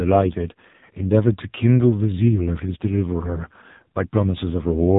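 Buzzy, synthetic speech with nothing above about 3.8 kHz runs through the whole clip, the mark of the AMR narrowband mobile codec. Its 8 kHz sampling caps the band, and the heavy pulse-driven vocal-tract modelling fits a low mode of around 6 kbps.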